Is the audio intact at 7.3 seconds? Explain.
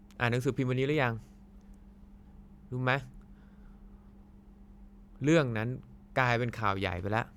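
Yes, the audio is intact at 7.3 seconds, with no audible fault at that moment.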